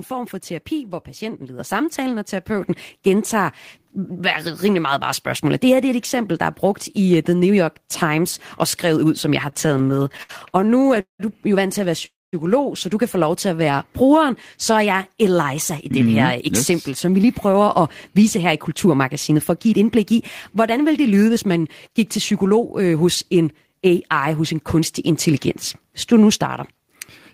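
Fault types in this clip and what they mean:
Microphone volume stepped up: the call software judged the mic too quiet and bumped its input level in one go, so voice and background jump together, by about 7 dB at 1.59 s and again by about 3 dB at 2.61 s, just after "samtalen og".
Repeated stalls (stutter): between 9.49 and 11.21 s the playback keeps running dry, 21 small stalls in all, each patched by stretching the last sound, the longest about 191 ms. Nothing goes missing, but roughly a quarter of that stretch is filler, so it drags and stutters.
Call audio freeze: right after "vant til at være" at 12.05 s the sound hangs for about 0.27 s, mostly silence, before picking up with "så du kan få". Packets were likely held up in transit, so a gap gets inserted while nothing is lost.
Jitter buffer slow-down: the receiver was topping up a thin buffer by repeating tiny pitch-period slices, so speech runs slow at unchanged pitch, around 93% speed from 13.51 to 14.28 s and 90% from 14.72 to 15.35 s, with drawn-out sounds.
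Jitter buffer speed-up: with too much audio queued, the receiver trimmed tiny pitch-period pieces to cut delay, so speech runs hurried at unchanged pitch, about 5% fast from 17.16 to 20.13 s and 7% fast from 20.56 to 24.27 s, ending before "hos en kunstig intelligens".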